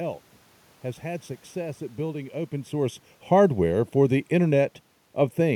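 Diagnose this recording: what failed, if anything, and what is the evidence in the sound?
The speech sounds hollow and phasey from start to finish, with fixed notches that never move. This is channel delay (comb filtering) at the driver or buffer stage. One channel lags by roughly 0.4 ms, so the mono sum cancels evenly spaced frequencies, starting near 1.5 kHz.

After "success at building open", from 2.73 s to 4.75 s, the level sinks by about 4 dB, and the room noise drops with it. That is automatic gain falling in call processing: the gain control judged the input too loud, or its background noise too strong, and eased its gain down gradually. The earlier change near 2.5 s is the talker moving.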